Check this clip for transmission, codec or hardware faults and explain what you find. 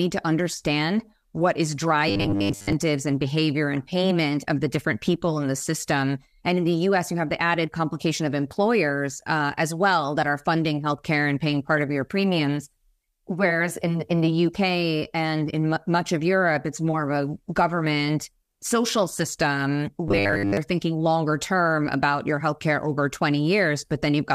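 Two faults of one kind turn up: robotic sound from repeated short buffers, from 2.09 to 2.73 s after "to understand what is" and from 20.08 to 20.57 s after "government social system". The speech becomes a rigid metallic buzz at 100 Hz, likely because a roughly 10 ms buffer was replayed while most of the incoming audio was skipped. On a spectrogram this appears as evenly spaced 100 Hz harmonic stripes, and the waveform shows identical repeating cycles.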